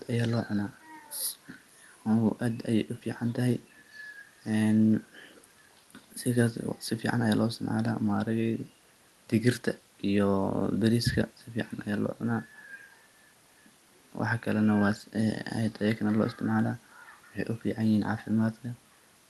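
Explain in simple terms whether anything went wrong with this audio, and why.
Nothing went wrong here, since the speech travelled through an ordinary internet call connection just as it's meant to, and the faint room noise sitting far beneath it is simply part of the place it was recorded rather than a problem.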